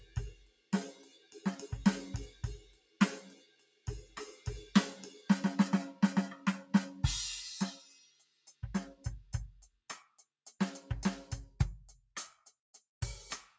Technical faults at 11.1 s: noise suppressor applied to music or sounds

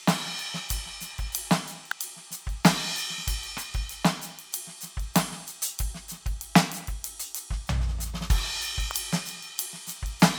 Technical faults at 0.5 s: none

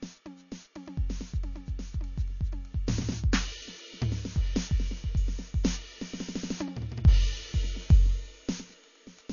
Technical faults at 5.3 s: low-bitrate audio saved at a high bitrate

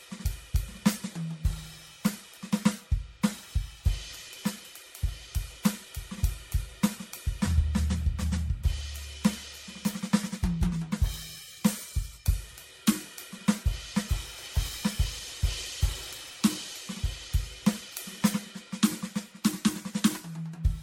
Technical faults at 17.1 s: generation loss

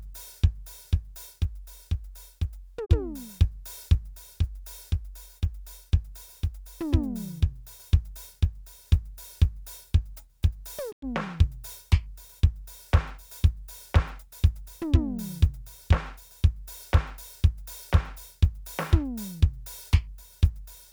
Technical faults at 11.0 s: digital broadcast dropout

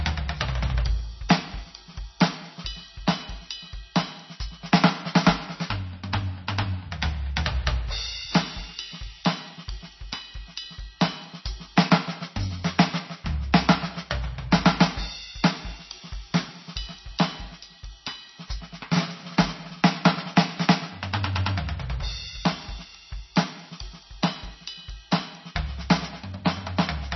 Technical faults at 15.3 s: MP3 compression

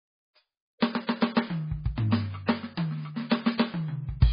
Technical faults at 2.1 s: MP3 compression; pre-echo

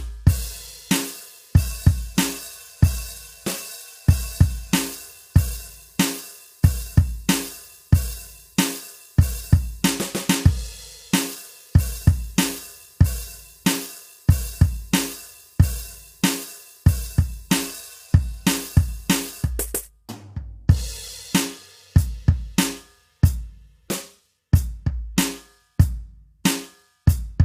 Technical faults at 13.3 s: low-delay AAC compression

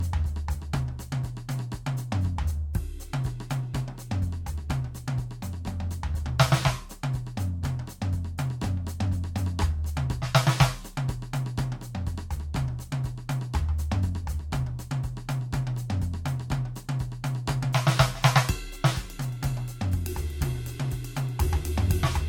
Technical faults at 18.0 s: generation loss

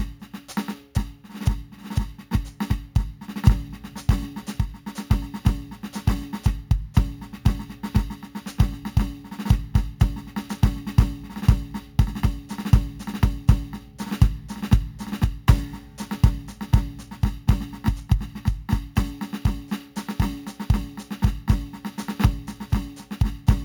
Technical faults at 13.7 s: imaging from sample-and-hold upsampling

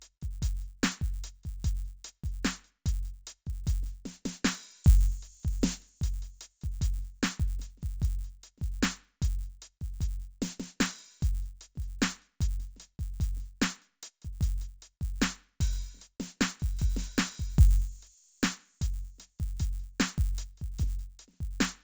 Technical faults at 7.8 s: resampler restarted on every block

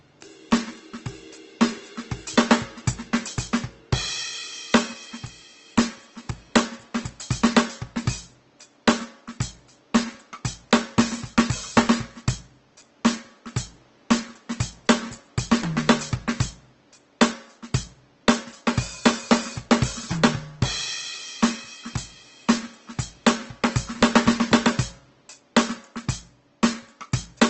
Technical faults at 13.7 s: Opus compression

